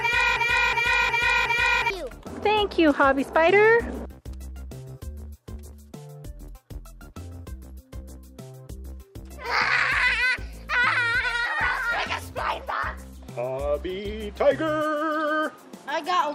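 The audio opens already caught in a broken-record loop: from 0.0 s to about 1.90 s, one fragment of roughly 0.36 s plays back to back, repeating four times with no variation, before the loop ends. Identical repetition of such a short piece points to a stall upstream, likely in the player, encoder or stream, with the last held fragment resent until data resumed. Whatever audio belonged in that opening stretch is lost.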